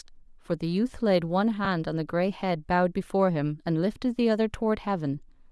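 Bluetooth LC3 compression runs throughout the speech, giving it a plainly audible breathy, grainy edge. That is likely LC3 coding at a rate near 48 kbps, with upper-band detail replaced by noise fill. A lost LE Audio frame at 1.65 s leaves a brief 10 ms smeared, noisy patch where the decoder repeated the previous spectrum with scrambled phase instead of fresh data.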